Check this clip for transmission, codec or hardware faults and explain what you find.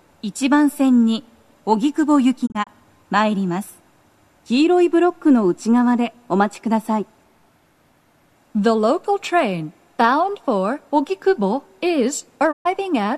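There are two digital broadcast dropouts. From 2.45 to 2.69 s, 72 ms of sound drops out in several holes of up to 24 ms, scattered over 192 ms. From 12.51 to 12.67 s there is a single 120 ms gap. The receiver muted frames it could not decode and faded out and back over 20 ms each time. Those soft edges separate it from a hard, clicky connection break.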